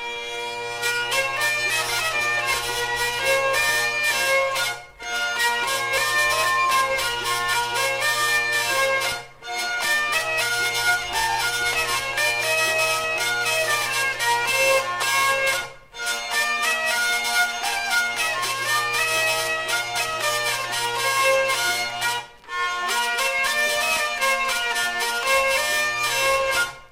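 From 5.38 to 6.97 s a pure 1 kHz tone swells over about a second and a half to roughly 5 dB above the sound. This is loudspeaker feedback squeal: the microphone is re-amplifying its own loudspeaker at that frequency.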